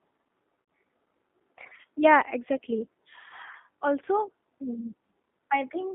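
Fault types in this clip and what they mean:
G.729 codec: Throughout, the speech sounds plainly rough and synthetic, confined to a narrow line band of about 200 Hz to 3.5 kHz. This is an 8 kbit/s codec rebuilding each 10 ms frame from a vocal tract filter, a pitch predictor and a few pulses.
VoIP packet loss concealed by the speech codec: From 0.62 to 0.68 s the sound briefly smears into a fading stretch. About 60 ms of audio went missing, which fits three lost 20 ms packets, and the decoder extrapolated its last pitch and filter at falling gain.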